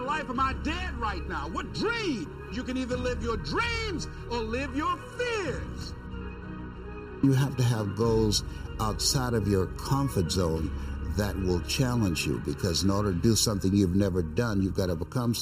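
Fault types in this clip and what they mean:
Channel delay (comb filtering): a sub-millisecond lag in one channel leaves evenly spaced notches from around 700 Hz, a hollow sound unlike a smooth low-pass dullness.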